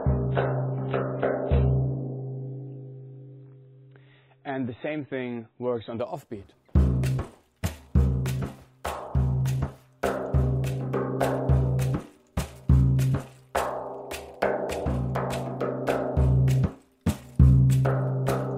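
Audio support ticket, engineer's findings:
Adaptive stream starting at a low bitrate, 0.0 to 6.0 s. Nothing above 4 kHz, heavy codec artefacts, then an abrupt gapless step up. Player began on a low rung, consistent with MP3 near 16 kbit/s, then switched to roughly 128 kbit/s after measuring bandwidth.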